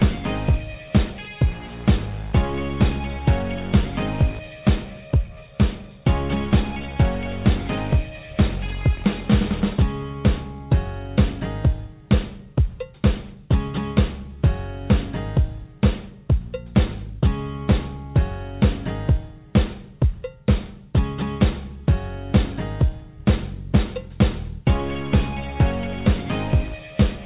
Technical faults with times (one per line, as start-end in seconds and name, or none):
none